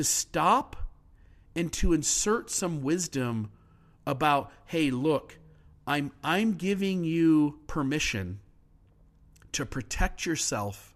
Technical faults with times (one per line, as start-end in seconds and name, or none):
none